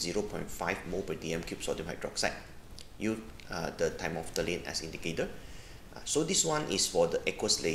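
Nothing in the audio stood out as a technical problem on listening.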